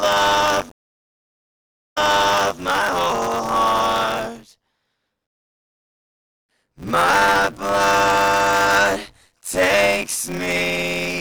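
A rattling, robotic buzz at about 94 Hz runs through the whole clip and rides only on the sound itself. This is buffer tearing, which fits a 512-sample buffer: the writing program and the hardware reading the ring buffer have slipped, so roughly two fifths of each period replays audio about 20 ms old, with hard joins on either side. Between 0.69 s and 2.59 s a stream reconnect breaks the flow. The audio drops into about 1.2 s of silence, then resumes 0.65 s earlier than where it stopped, so a stretch is heard twice, which suggests the server resent a burst to the freshly started decoder. From 7.98 s to the end, computer activity noise appears as a faint buzzing chirp at around 150 Hz, roughly 45 dB below the signal. It follows the computer's processing load rather than the audio, as shifting processor, graphics or mouse activity disturbs the ground the audio circuit shares.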